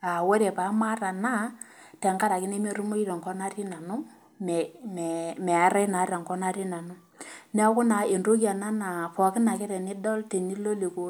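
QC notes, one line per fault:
No faults found in the speech on listening; nothing to log.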